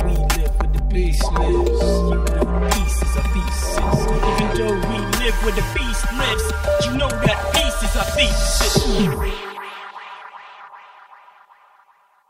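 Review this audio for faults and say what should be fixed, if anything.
Channel delay (comb filtering) runs through the whole clip. One channel arrives around 5 ms late, and when the two are summed to mono, everything they share cancels at evenly spaced frequencies. The first notch sits near 100 Hz and the rest repeat roughly every 200 Hz above it, which gives the hollow, phasey colour. The notches never move, so this is not flanging or phasing, whose notches sweep. The dullness is a fixed pattern of holes across the spectrum, not a high-frequency loss like a low-pass filter. To prevent it, align the channels to the sample before any mono fold-down, or fold down from a single channel.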